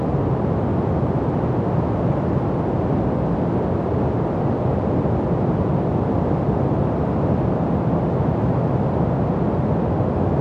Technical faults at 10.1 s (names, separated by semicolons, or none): none